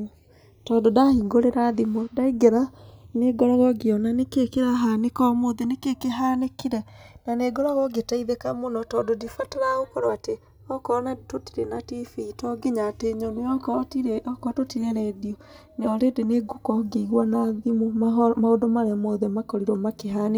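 Speech whose two channels come from devices on separate clocks that disagree by a few hundred ppm, so the inter-channel delay slides to around 5 ms by the end; summed to mono, sweeping comb notches make the channels drifting apart audible throughout as slow flanging.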